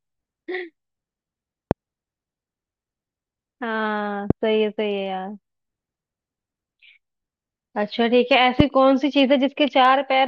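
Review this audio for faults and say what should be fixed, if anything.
A sudden voltage step entered the signal chain three times, likely from a connector, switch or static discharge, and the downstream circuits shaped each step into a brief pulse. The result is a loud pop at 1.71–1.73 s, 4.30–4.33 s and 8.60–8.62 s, each a single sharp click about 20 ms long that stands roughly 20 dB, 15 dB and 20 dB above the speech, which continues underneath. To prevent it, secure and clean all connections, avoid switching gear during recording, and ground equipment against static.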